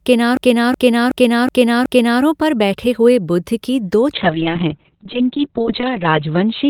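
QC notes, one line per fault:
0.37–2.23 s, system hang loop: The same 0.37 s slice of speech repeats five times, about 2.7 times per second. It sounds like a machine-gun stutter before "पर बैठे हुए". The system stalled while the hardware kept replaying one ring buffer, which fits a 16384-sample buffer.
4.15–6.70 s, call bitrate drop: After "की दो", the speech turns coarse and muffled to the end. The encoder rate fell from 48 to 6 kbps. Bandwidth narrowed from 20 kHz to 4 kHz, removing the upper frequencies. It never recovers.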